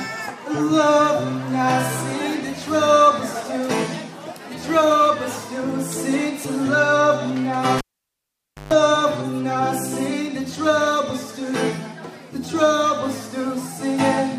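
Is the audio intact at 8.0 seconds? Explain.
No, 8.0 s falls inside a cable pulled and plugged in, 7.78 to 8.73 s: a pop, near silence, then 0.14 s of 50 Hz buzz as the tip touches, and another pop as the sound returns, unlike a clean dropout.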